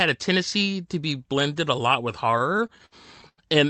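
From 2.31 to 3.40 s the speech stutters and drags: ten short hitches in quick succession, the longest about 93 ms, each holding or smearing the sound just before it. These are repeated stalls (stutter). Audio kept reaching the receiver late, so its jitter buffer ran dry again and again, and each gap was filled by stretching the last sound, fading it in the longer waits. About a quarter of that stretch is such fill, though nothing is lost. The Opus call path limits the band to 8 kHz.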